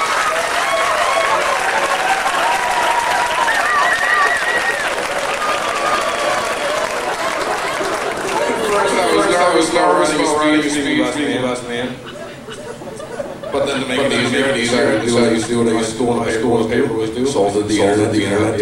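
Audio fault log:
Throughout, doubled audio track: a second full-band copy trails the original by around 400 ms at about the same level, with no decay or room colour, so everything sounds stuttered. It's likely a second, slower capture path mixed in alongside the main one.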